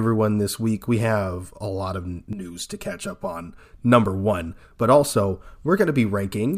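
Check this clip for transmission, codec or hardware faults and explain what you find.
One fault stands out: channel delay (comb filtering) from 2.33 to 3.58 s, just after "have a lot of". One channel lags around 5 ms before summing, cancelling near 100 Hz and every 200 Hz above. The speech turns hollow and phasey, with evenly spaced dark horizontal notch bands on a spectrogram.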